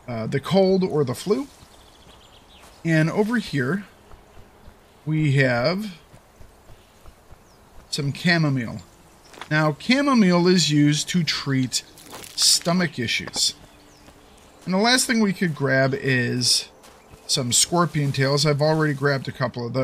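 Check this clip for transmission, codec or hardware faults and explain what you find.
No faults detected.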